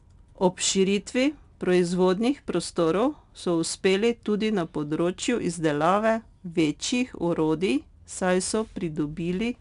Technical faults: 4-bit ADPCM compression

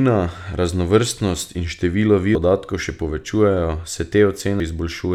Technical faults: audio missing between chunks

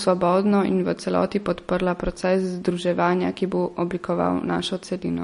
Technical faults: MP3 compression

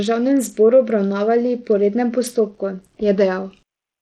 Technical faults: Bluetooth SBC compression

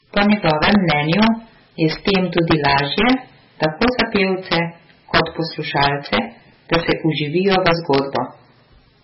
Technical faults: integer overflow; MP3 compression

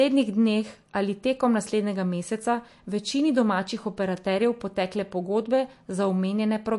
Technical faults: MP3 compression

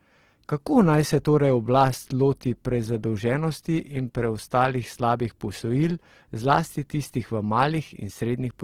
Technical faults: Opus compression

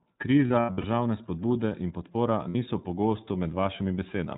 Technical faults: iLBC codec; lost iLBC frames

